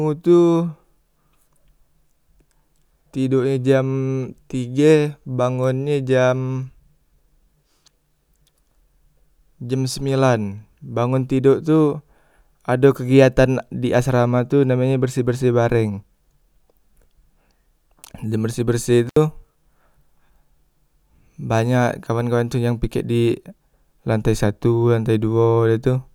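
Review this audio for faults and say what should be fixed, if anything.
An intermittent contact opens the signal path from 19.07 to 19.17 s: the speech drops out for about 72 ms, with crackle at each edge and faint hiss in the gap, as a loose cable or plug briefly loses connection. Reseat or replace the suspect cable and connectors, and secure them with strain relief before recording.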